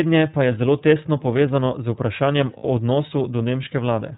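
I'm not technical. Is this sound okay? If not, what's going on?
No, not quite. The whole clip has gone through the iLBC codec, a compression scheme built for internet phone calls. It throws away everything above about 4 kHz, so the speech sounds muffled and boxy, like an old phone line, and the squeezing leaves it noticeably rough and a bit synthetic, almost robotic in places. That damage is plainly audible from start to finish.

Then there's a short glitch of lost iLBC frames from about 2.57 to 2.65 s, roughly 60 ms where a couple of data packets never arrived. To cover the hole, the decoder kept repeating the last bit of voice it had, blended with some noise, so for that instant you hear a held, slightly buzzy or breathy vowel sound. Right after, the voice snaps back to normal.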